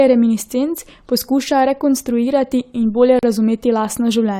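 A gap at a join of encoded pieces opens from 3.19 to 3.23 s: a gap of about 39 ms cuts into the running speech, its edges smeared so the silent part is shorter. It points to separately encoded segments of roughly 4 s joined untrimmed, keeping the encoder delay and final-frame padding.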